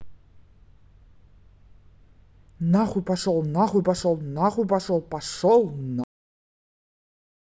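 At 6.04 s the speech just stops mid-sound. That's a cut-off end: the final stretch of buffers never got written or played out, so there's no natural decay, just an abrupt drop into digital silence that holds for the last second and a half.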